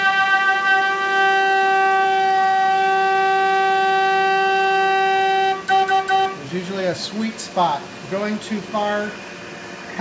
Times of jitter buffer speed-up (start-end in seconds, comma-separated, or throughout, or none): none